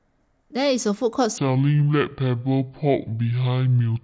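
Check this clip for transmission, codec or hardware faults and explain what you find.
One fault: a section at the wrong speed, from 1.38 s to the end of the speech clip. At that point playback drops to 0.625 times the original rate, so pitch falls by roughly seven semitones and the voice turns deep, slow and drawn out. The likely cause is an editor or player running that stretch against the wrong clock. On a spectrogram, harmonics and formants shift downward and bunch closer together. On the waveform, syllables stretch out longer in time.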